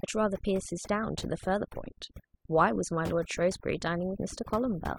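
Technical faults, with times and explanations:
Throughout, overdone noise removal: a noise reduction stage was pushed too hard on a noisy speech recording, so any frequency band sitting near its noise estimate is pulled far down or switched off, and the softer parts of the voice are taken with it. Between phrases the background falls to near silence dotted with twinkling specks. On a spectrogram the gaps look blank, scattered with isolated bright dots, and the speech shows ragged, holed harmonics.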